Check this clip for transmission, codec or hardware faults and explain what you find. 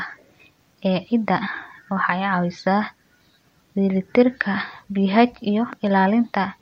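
One hardware-related fault is present. A loud pop occurs from 5.73 to 5.89 s. A sudden voltage step or pulse, likely from a plug, switch, static discharge or driver glitch, enters the signal and is shaped by the downstream circuitry. It is heard as two sharp pops in quick succession, peaking a few decibels above the speech, which carries on underneath.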